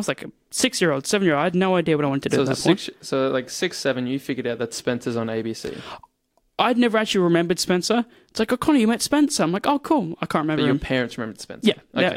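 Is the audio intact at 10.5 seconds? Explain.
Yes, the audio is intact at 10.5 seconds, with no dropout, distortion or other fault at that point.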